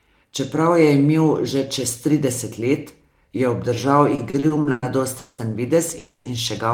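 From 4.15 s to 5.41 s the speech suffers repeated stalls (stutter). The jitter buffer ran dry seven times as packets arrived late, and each time the receiver stretched the last sound to cover the wait. About 450 ms is filled this way, roughly a third of that stretch, with the longest hold at 200 ms. Nothing is lost, but the speech drags and hiccups. A spectrogram shows smeared, flat-lined bands where harmonics freeze, and the waveform shows repetitive, decaying segments.

At 5.98 s a call audio freeze runs to 6.28 s. For 270 ms the last sound is held as a fading buzz, with no drop to silence, and then the speech resumes where it stopped, now that much later. The likely cause is packets held up in transit, emptying the buffer. On a spectrogram this appears as a horizontal smear of frozen frequency content. The waveform shows a steady, tapering patch in place of normal speech movement.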